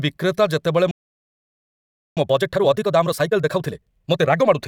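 At 0.91 s the speech just drops out for about 1.26 s, a playback stall, most likely the player starving for data or its thread getting blocked. From 2.17 s to 4.57 s you get time-compressed catch-up: the speech runs about 1.5 times fast at normal pitch.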